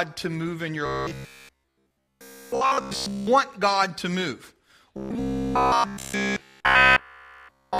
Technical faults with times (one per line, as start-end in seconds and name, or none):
0.86-3.27 robotic sound from repeated short buffers
4.97-7.79 robotic sound from repeated short buffers